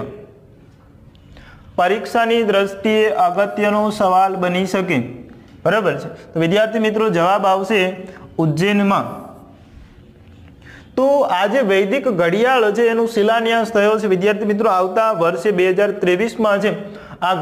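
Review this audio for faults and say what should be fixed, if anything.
No faults can be heard anywhere in the recording, so there is nothing that needs to be fixed. No corrective work is called for before it is put to use.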